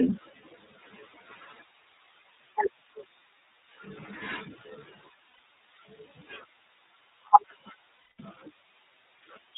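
Speech coded throughout with the iLBC codec: nothing passes above 4 kHz, and it has a plainly rough, synthetic edge rather than the clean dullness of simple band-limiting, which fits iLBC's 30 ms frame mode. Lost iLBC frames at 5.28 to 5.40 s (120 ms) and 7.95 to 8.20 s (240 ms) sound like held, buzzy vowels, the longer one fading, instead of silent dropouts, and the voice snaps back at once afterwards.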